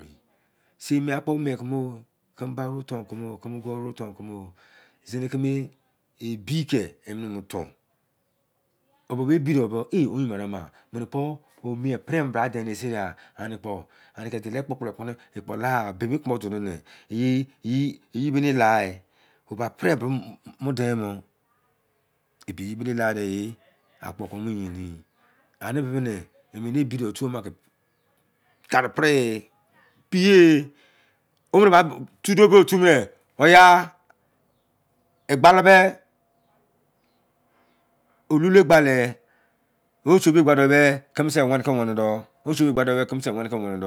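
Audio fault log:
42.75 s, underrun with held sample: the speech stalls for 14 ms as a brief flat hold, then resumes. The output buffer ran dry, the converter held its last value, and about 15 ms of audio was skipped.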